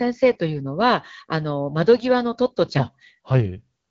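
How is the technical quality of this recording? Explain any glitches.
The recording carries the light coding texture of an AMR wideband (HD Voice) call, consistent with a 12.65 kbit/s rate, and has one glitch near the end. From 3.58 s to the end, an AMR rate drop occurs. A weak radio link forces the codec down, likely to 6.6 kbit/s, so the speech turns rough and synthetic without losing bandwidth or dropping out.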